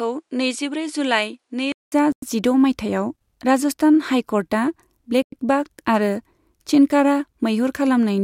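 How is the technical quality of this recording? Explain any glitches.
The recording has two kinds of glitch.

From 0.0 to 1.92 s, the speech sounds duller, with nothing above 11.4 kHz. It is about 5 dB quieter and has faint added noise. The input likely switched to a poorer device. A 200 ms silence marks the switch.

At 2.12 s and 5.22 s, 100 ms holes appear. This is a gap between chunks. The audio travelled in 3-second chunks, and silence was inserted at each join. No sound is lost, but the flow breaks.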